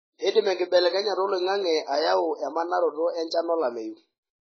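Speech throughout, with a dull, smeared, warbling sound and nothing above 7.6 kHz. A spectrogram shows a flat ceiling, likely from heavy AAC compression at a low bitrate, around 16 kbps.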